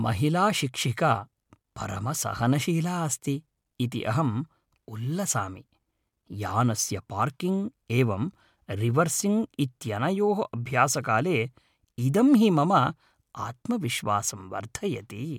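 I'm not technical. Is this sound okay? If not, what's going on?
Yes, no faults to hear.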